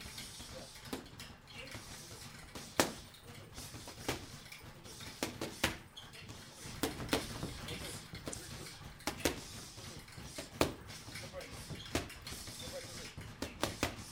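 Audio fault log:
8.30–8.34 s: damaged data in the compressed stream. A short blip cuts through the sound for about 40 ms. Corrupted bytes at this point make the decoder misread the frames and lose sync. It then hunts for the next valid frame header, and the garbled output leaks through.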